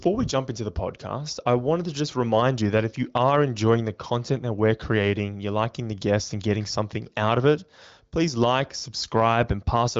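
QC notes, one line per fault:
Nothing stood out on listening; the speech is carried over an AMR wideband (HD Voice) codec path, with the clarity of one of its higher rates and nothing heard above about 7.5 kHz.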